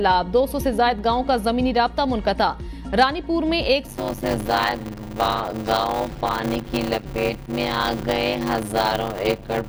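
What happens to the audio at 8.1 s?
A padded block size mismatch runs from 3.87 s to the end: short blocks, which fits 256 samples, are zero-filled to fit a larger read, giving a 100 Hz buzz and playback slowed to 0.533× at roughly normal pitch.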